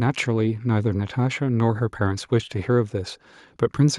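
Speech recording with nothing technically wrong that can be heard at any point.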